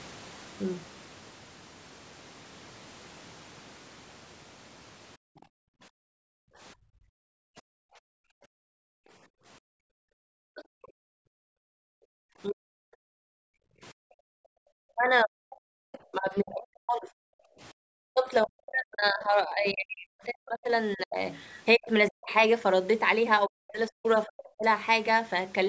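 From 5.17 to 14.64 s, the echo canceller reacts to loudspeaker playback by clamping down hard on the microphone. This is background gated by the echo canceller. The room sound falls away by as much as about 40 dB and returns when the canceller releases. Across that span it is missing for roughly seven seconds in total, so the ambience keeps dropping out and coming back.

Within that stretch, the speech itself dips sharply from 10.14 to 10.97 s and again from 12.48 to 12.75 s, falling by something like 40 dB for under a second each time. This is likely speech suppressed in double talk: both sides were talking at once, and the canceller could not tell the near talker from the loudspeaker echo, so it pulled everything down. The same suppression returns from 14.92 to 24.64 s, chopping the voice in pieces for around five seconds in total.

During that last span, faint scraps of a second voice come through at 15.92–15.98 s, 21.34–22.1 s and 24.39–24.43 s, sitting roughly 25 dB below the main speech. 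The likely cause is the other side's voice leaking through: the canceller left part of the far talker in the microphone signal. Most scraps are brief, but the one near 21 s lasts most of a second.

At 17.43–17.6 s, the background is briefly gated again, dropping by about 30 dB for a short blink. Nothing above 8 kHz reaches the recording, which fits the call's normal microphone processing.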